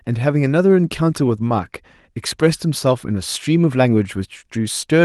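No technical faults can be heard in this speech.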